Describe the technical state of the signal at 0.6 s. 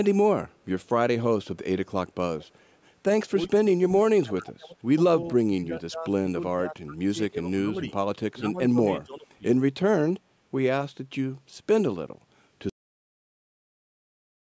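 At 0.6 s the speech signal is intact, with no fault present; it carries only the ordinary shaping of call microphone processing, which trims the lowest bass and leaves nothing above 8 kHz.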